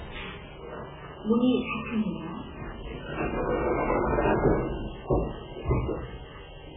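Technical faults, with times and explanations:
Throughout, MP3 compression, likely at a very low bitrate that fits around 8 kbps: short of bits, the encoder removes everything above 3.7 kHz and drops weak frequency lines that flicker between frames, so the sound turns dull, watery and swirling, with smeared attacks.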